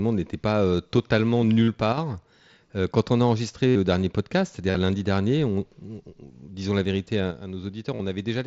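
An unstable converter clock causes sample clock jitter throughout the speech, on the order of ten microseconds, adding a faint hiss, roughly 30 dB down, that roughens loud, bright sounds and disappears in pauses.

At 1.63 s the headset link loses packets for 45 ms. This concealed Bluetooth headset packet loss repeats recent waveform, giving a brief buzzy held tone with a small warble as real audio resumes.

From 1.93 to 1.98 s the level drops by about 6 dB, most likely because one channel drops out, leaving only half of the shared signal after the mono sum.

Further packet losses follow at 3.68 s for 75 ms (the longest), at 4.71 s for 37.5 ms, and at 7.95 s for 37.5 ms. Each is heard as the same repeated-waveform tone, carried through the mSBC link's light graininess.

From 7.31 s to the end, the level again falls by about 6 dB, likely from one channel dropping out, so the final stretch sounds quieter.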